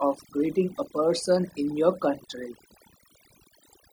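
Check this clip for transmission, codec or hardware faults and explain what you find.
One fault runs through the whole recording: overdone noise removal. It is present from start to finish. A noise reduction stage was set too aggressively for a noisy speech recording. It pushed individual frequency bands far down, or cut them out, whenever they came close to its noise estimate. Quieter parts of the voice fell into those bands and were removed too. The background drops and breaks up into twinkling, warbling specks.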